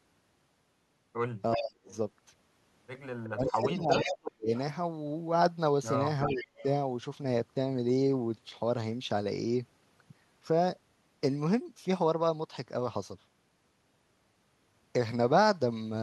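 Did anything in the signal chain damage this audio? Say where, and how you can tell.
Yes, in the call processing stage. The echo canceller likely failed during double talk: with both ends active, it could not tell the local talker from the loudspeaker echo and turned everything down. This is speech suppressed in double talk. The speech dips by about 25 dB from 1.56 to 1.92 s, by about 40 dB across roughly a second between 3.27 and 4.51 s, and by about 20 dB from 6.34 to 6.48 s.

The same stage also let echo through. At the far end, the loudspeaker's sound reached the microphone, and the canceller likely did not remove all of it, so it came back as echo leak. A copy of the speech trails by 372 ms at 1.57–1.96 s (about −20 dB), 3.24–3.52 s (about −5 dB), 3.9–4.12 s (about −10 dB), 4.55–4.6 s (about −25 dB) and 6.28–6.64 s (about −15 dB). The fixed delay is what marks it as returned echo rather than room reverberation.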